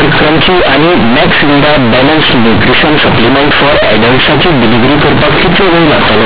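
From start to end, the speech suffers companded audio read as linear. A-law bytes are played as raw 8-bit samples, so sign changes swing half-scale. It sounds loud and buzzy with noisy pauses, and the waveform shows a dense block without quiet gaps.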